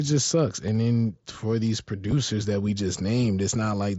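A brief, nearly hidden smear comes at 0.67 s, between "just sucks" and "then for these", and at 2.11 s, before "that we just". Both are concealed Bluetooth headset packet loss: about 7.5 ms went missing, and the receiver patched each gap with a closely matching stretch of the preceding waveform.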